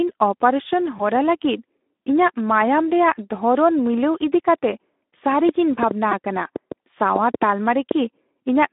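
Throughout, the speech carries Speex codec damage that is plainly audible: a hoarse, noisy texture typical of CELP coding at a low rate, consistent with roughly 11 kbps. The line band runs from about 250 Hz to 3.6 kHz, giving a narrow telephone-like sound.

From 0.97 to 1.01 s, VoIP packet loss concealed by the speech codec fills a 20 ms gap, a single lost frame. The decoder extends the previous pitch and filter, so the sound smears and fades before normal decoding resumes.

At 6.12 s, a repeated buffer produces a short click-like buzz. Fresh audio arrived late, so the same 2.67 ms fragment, which fits a 128-sample buffer, plays several times in a row with hard joins, and about 10 ms of real audio is lost.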